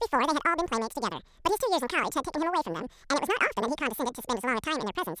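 Speech, and it's got a wrong sample rate problem the whole way through: everything runs at double speed and sits a full octave (12 semitones) high, chipmunk-style. That 2:1 shift fits 16 kHz audio being played back at 32 kHz without any conversion.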